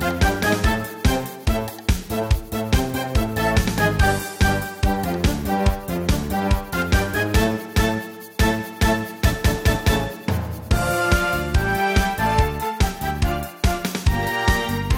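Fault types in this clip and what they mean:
No fault types can be heard in this clip.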